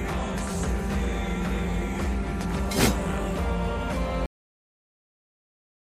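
The final buffers were never written out, so at 4.26 s there's a cut-off end: the sound stops mid-event and drops straight to digital silence without decay.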